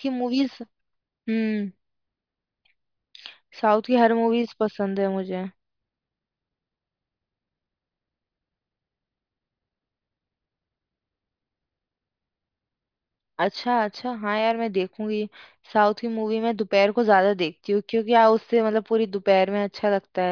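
Speech recording with no audible technical fault anywhere in it.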